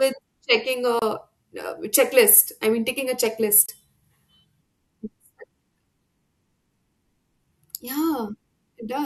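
At 0.99 to 1.02 s, and again at 3.66 to 3.69 s just after "I mean taking a", the speech cuts to silence for about 27 ms, then resumes further along as though it had kept playing. Each gap is most likely a Bluetooth dropout: audio packets arrived too late at the headphones and were discarded. A hole of this length fits roughly two lost packets.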